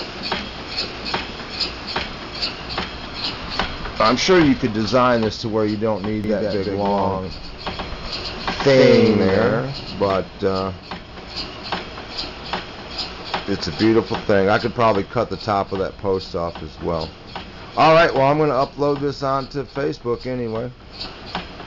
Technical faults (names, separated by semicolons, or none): doubled audio track